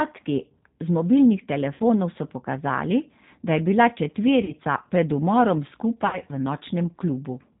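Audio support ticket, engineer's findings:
G.729 codec throughout: rough, slightly synthetic speech; spectrogram cuts off hard at 4 kHz with smeared harmonics. Artefacts plainly audible, consistent with an 8 kbit/s CELP frame-based coder.

VoIP packet loss concealed by the speech codec at 1.74–1.82 s (about 60 ms lost), 4.44–4.52 s (about 40 ms) and 6.07–6.20 s. The decoder extrapolates the last pitch and filter into a fading buzzy tone or coloured noise, visible as a decaying waveform envelope. Gaps fit two to three 20 ms packets.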